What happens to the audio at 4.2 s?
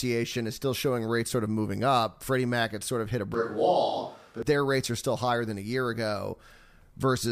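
At 4.2 s the recording has a switch to a distant microphone, which runs from 3.34 s, just after "sort of hit a", to 4.42 s, where "their rates are still" begins. The close microphone's signal likely dropped out, so a microphone further away was carrying the speech. The speech suddenly turns roomy and hollow, with thinner bass. The level stays about the same, and room noise rises to roughly 35 dB below the speech. The sound snaps back to close pickup at 4.42 s.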